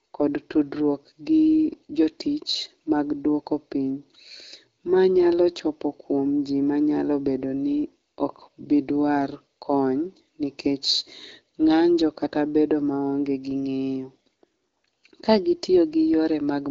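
No technical faults are present in the speech, which has passed through the AMR wideband (HD Voice) codec with only light coding texture and no content above 7.7 kHz, consistent with a rate of around 12.65 kbit/s.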